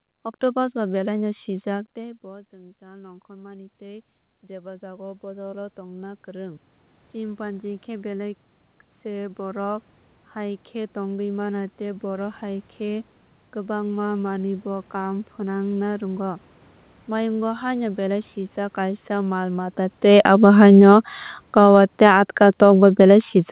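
From 20.03 s, right after "mal mata", the speech begins loud and then sinks steadily to the end at 23.51 s, the room background dropping with it. This is automatic gain falling: the gain control judged the input too loud or its background noise too strong, and gradually lowered its gain.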